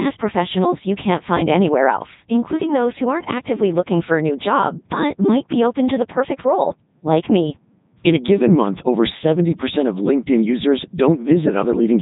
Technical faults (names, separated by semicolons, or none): Codec 2 vocoder